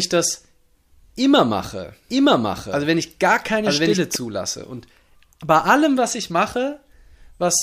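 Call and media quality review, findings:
Doubled audio track, 2.10–4.15 s: speech repeats about a second late at roughly equal level, dry, cutting in and out abruptly. Likely a second capture path or misaligned edit.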